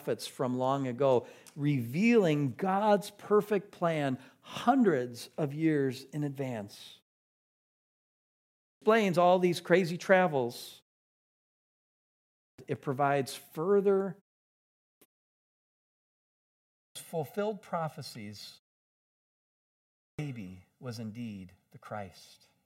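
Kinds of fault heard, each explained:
Clipped start after a pause: after each silence the output device is slow to wake, so about half a second of the returning speech is swallowed, at 8.3, 12.08, 14.54, 16.44 and 19.68 s. Words begin abruptly, already underway. This differs from muted pauses, which fade background but never cut speech.
Channel delay (comb filtering): from about 16.0 s to the end, one channel lags the other by roughly 1.5 ms, and when they are summed to mono, shared content cancels at evenly spaced frequencies starting near 300 Hz. The speech turns hollow and phasey throughout, steadily, unlike brief dropouts.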